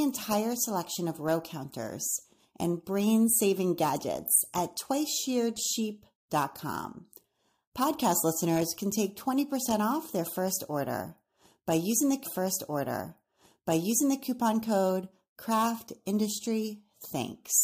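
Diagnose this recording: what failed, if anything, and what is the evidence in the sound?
The failure sits at the streaming and playback stage: a stream segment repeated. Just after "order by using the", at 12.24 s, a small blip marks a jump back, and about 2.0 s of speech plays a second time until 14.24 s, where "code craft" continues. The player fetched or queued the same chunk twice. A buffer underrun would leave a gap or a stutter lasting milliseconds. Here a whole segment returns intact, and the clip runs about two seconds longer.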